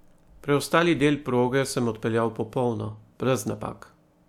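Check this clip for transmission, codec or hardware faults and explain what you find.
Nothing in the speech points to a fault. There is nothing further to report.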